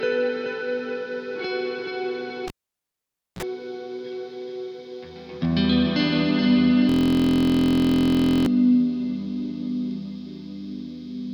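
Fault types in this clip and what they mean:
Cable pulled and plugged in: A pop at 2.48 s, then near silence for about 0.9 s, a brief 60 Hz mains buzz lasting roughly 39 ms as the plug tip makes contact, and another pop at 3.43 s when the sound returns. A live cable was pulled out and pushed back in.
System hang loop: From 6.89 to 8.46 s the audio becomes a steady buzz at 43.1 Hz, as one 23.22 ms slice repeats exactly dozens of times. This fits a 1024-sample ring buffer that the hardware kept replaying while the computer or driver was frozen.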